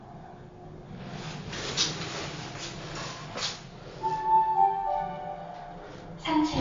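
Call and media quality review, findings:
MP3 compression, throughout the clip. Symptom: plainly audible watery, swirly texture, smeared attacks, nothing above 7.2 kHz. Likely component: MP3 encoder starved of bits, consistent with about 48 kbps. Weak spectral lines flicker frame to frame. Unlike a plain low-pass filter, the top is missing *and* the remaining band warbles.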